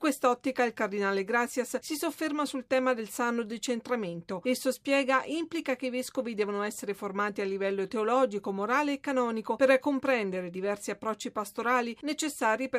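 Nothing in the audio stood out as a technical problem on listening.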